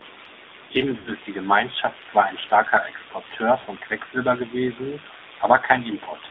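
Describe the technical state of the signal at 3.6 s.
From 3.60 to 3.67 s there are lost AMR speech frames. About 60 ms of audio, consistent with three 20 ms frames, is concealed by repeating the last pitch and vocal tract settings at falling gain. The result is a brief drawn-out, fading warble rather than a clean silent gap or click. Underneath, the AMR narrowband mobile codec limits the band to 250 Hz–3.7 kHz and adds a plainly audible buzzy, synthetic texture.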